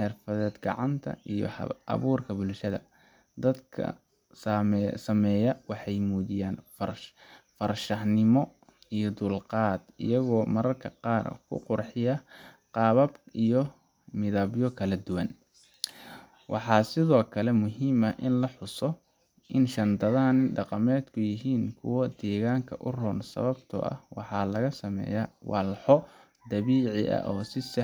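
No technical faults can be heard anywhere in the speech. Nothing in the recording calls for a timestamp or an explanation.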